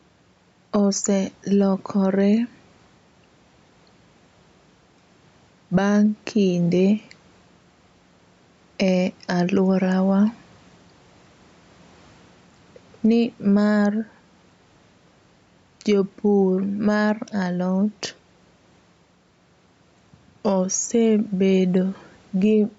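Right through the speech there's gain pumping: the level swings by roughly 5 dB, so everything sounds squashed. That's likely input gain set too hot, with a fast limiter clamping down on each loud syllable.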